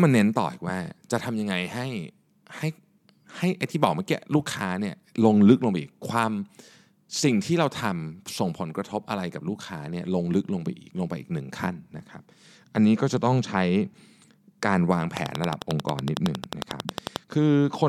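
A speech recording with a train of clicks from 15.17 to 17.17 s: around twenty near-identical pulses at a steady 11.1 per second, standing roughly 15 dB above the speech. The regular ticking most likely comes from electrical interference or a faulty connection or power supply.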